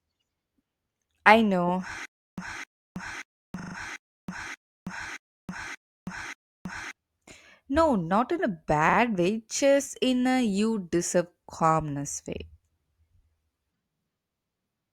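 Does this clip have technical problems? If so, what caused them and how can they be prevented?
Yes. Just after "I know", from 2.05 to 6.91 s, there is a stutter with silent gaps, most likely because the player or stream stalled and, at each retry, replayed the last fragment it held before running dry. The result is a 258 ms burst that comes back 8 times, every 582 ms, with 324 ms of dead digital silence between repeats. The audio that should have filled that stretch is gone. More buffering ahead of playback and a player that waits or conceals gaps instead of looping the last fragment would prevent this.

Overlapping that stretch, also after "I know", repeated frames appear from 3.59 to 3.75 s. A short run of compressed frames was written or sent more than once, and the decoder played it again. The repeating unit sounds like a 40 ms block of two frames played four extra times, so the same fraction of a second is heard again in quick succession. 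This adds 160 ms to the clip. Checking frame sequence numbers or timestamps and discarding duplicates before decoding would prevent it.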